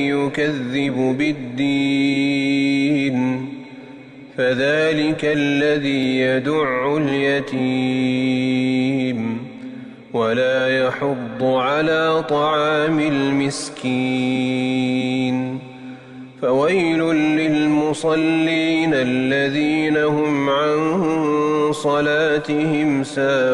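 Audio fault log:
Nothing stood out on listening to the clip.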